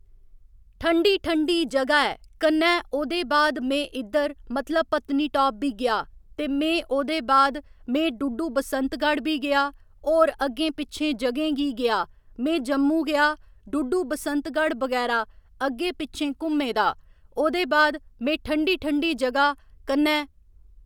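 No technical faults detected.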